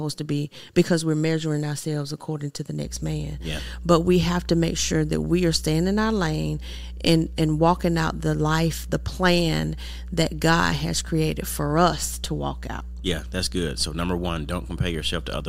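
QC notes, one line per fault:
2.85–15.49 s, mains hum: right after "ourselves according to the", a steady 60 Hz drone comes in and sits under the speech all the way to the end. It's loud, only around 10 dB below the speech, so you'll hear it clearly in the pauses. That steady low tone is the power line getting into the signal, most plausibly through a ground loop or a transformer close to the cabling or gear.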